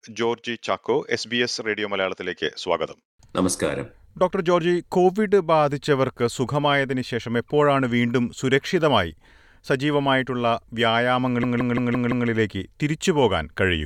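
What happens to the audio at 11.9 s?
A system hang loop runs from 11.44 to 12.29 s: the output froze and replayed one 171 ms chunk (fitting an 8192-sample buffer) five times, a machine-gun stutter at about 5.9 Hz.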